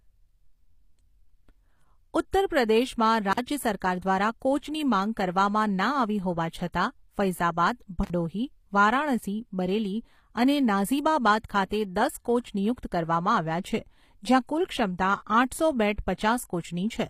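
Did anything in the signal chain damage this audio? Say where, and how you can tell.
Yes. At the codec stage, the audio was likely coded with HE-AAC compression, which keeps only the lower spectrum and synthesises the treble by copying lower bands upward under a coarse envelope. The codec damage is plainly audible throughout the 17-second speech clip, and nothing exists above 15.5 kHz. The damage points to a low bitrate around 24 kbps. Because the rebuilt treble is not the original, its harmonics fail to line up with those below the crossover.

In the analogue wiring, an intermittent contact (a loose cable or plug) opened twice: from 3.31 to 3.39 s, with the line open for about 46 ms, and from 8.03 to 8.10 s, open for about 51 ms. Each time, the connection briefly broke and the signal stopped reaching the next stage, so the speech drops out or breaks up for that stretch before the contact closes again and the sound returns.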